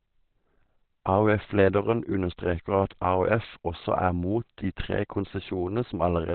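A speech clip that was likely squeezed through Opus compression at a very low rate, consistent with about 12 kbps in its narrowband speech mode. Nothing survives above 4.3 kHz throughout, so the sound is muffled, hoarse and heavily degraded.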